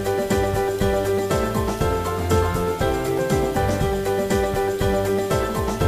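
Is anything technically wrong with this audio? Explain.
Yes. Low bit depth without dither runs throughout the clip. The sound was likely rounded to about 6 bits with no dither, so the error tracks the signal, sitting only about 25 dB below it. Quiet passages turn gritty and grainy, and denser material takes on a near-steady hiss.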